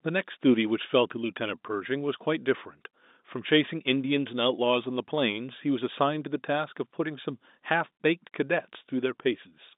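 No technical faults are audible.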